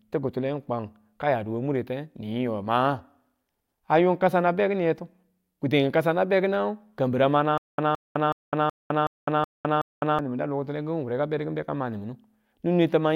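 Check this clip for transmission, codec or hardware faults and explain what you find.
One playback fault is present: a stutter with silent gaps between 7.58 and 10.19 s. A 168 ms fragment of speech plays seven times, each followed by about 205 ms of dead digital silence, so the burst returns every 373 ms with mechanical regularity. The likely cause is a stalled stream or player that replays its last buffered chunk on each retry and then runs empty, so the speech that should have filled those seconds is lost. Because of the true silence between repeats, it is not a seamless loop or a simple dropout.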